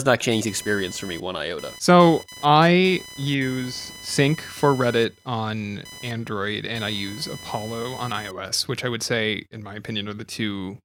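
From 0.31 s to 8.31 s, computer activity noise sits under the speech. Changing load on the computer's processor or graphics hardware disturbs the ground the audio circuit shares. That disturbance leaks into the recording. It sounds like a buzzing chirp, pulsing roughly a thousand times per second. It sits around 20 dB below the speech. It follows the machine's activity, not the talker. It stops at 8.31 s, well before the clip ends.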